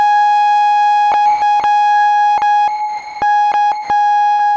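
A music clip in which the sound is repeatedly replaced by comfort noise, likely sound dropped by the voice detector treating the music as background, at 1.12–1.14, 1.26–1.42, 1.60–1.64, 2.38–2.42, 2.68–3.22, 3.52–3.54 and 3.72–3.90 s. The longest gap is 540 ms. On a spectrogram these appear as flat, featureless noise blocks where the musical structure vanishes, and the waveform drops to a low, even floor. A burst of packet loss at 4.32–4.42 s removes about 80 ms of music. The receiver stretches the preceding sound into a fading tail, which shows as a smeared, decaying band before the signal resumes further on. Spectral content throughout stops at 8 kHz, consistent with the G.722 call codec.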